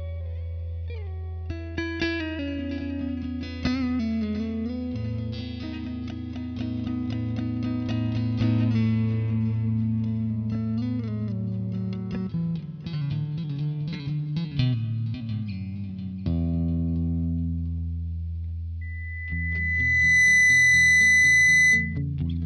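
At 18.81 s a loudspeaker feedback squeal starts: the microphone re-captures its own loudspeaker, and loop gain above unity at 2 kHz lets that tone swell over about a second and a half to roughly 10 dB above the sound, lasting until 22.02 s.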